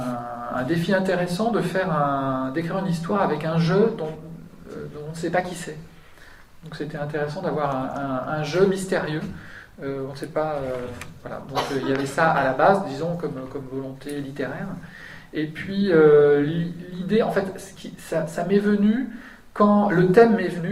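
No technical faults can be heard anywhere in the audio; the signal stays continuous and steady throughout, with no breaks, distortion or level disturbances.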